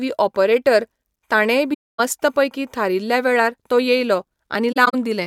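AAC frame loss with muting hits this speech clip from 1.73 to 2.00 s, between "ऑपरेटर ताणेंय" and "मस्त पैकी थारिल्ल्या वेळार", a soft-edged 256 ms silence, and again as brief dropouts scattered across 4.72 to 4.94 s, the longest about 40 ms. The decoder zeroed the missing frames, and overlapping windows faded around each gap.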